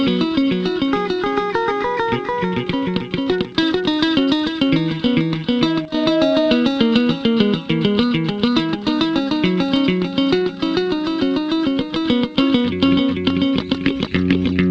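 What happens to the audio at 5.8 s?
A loudspeaker feedback squeal runs from 5.62 to 6.68 s. A single 631 Hz tone swells over about half a second to roughly 5 dB above the sound. The microphone is picking up its own loudspeaker, and at that frequency the loop gain exceeds one. Unlike steady mains hum, this tone builds on itself.

A sudden gain jump overlaps it from 5.85 to 5.94 s. The sound and its background noise drop together by about 9 dB in an instant step rather than a fade, likely from a gain change applied without a ramp.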